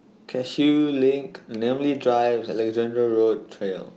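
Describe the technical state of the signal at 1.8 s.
Right around there, from 1.73 to 1.79 s, you're hearing a lost packet rebuilt from error correction. About 40 ms went missing, which fits a couple of 20 ms Opus packets, and the decoder filled it from the low-bitrate backup copies. So there's no gap, just a brief rougher, noisier patch.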